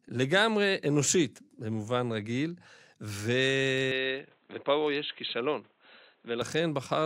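Input switched to a poorer device, from 3.92 s to 6.42 s: for these 2.5 seconds the speech abruptly loses everything above about 4.1 kHz and turns dull and boxy, then clears again at the end. There is no gap at either change and the loudness stays much the same, but a faint new background noise, far below the speech, appears. This is likely a mid-recording switch to a narrower-band microphone or headset call profile.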